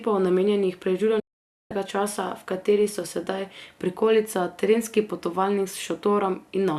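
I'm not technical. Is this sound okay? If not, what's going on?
No. A digital broadcast dropout silences the speech from 1.19 to 1.71 s. The receiver lost the signal, muted, and resumed at "časa v kateri so".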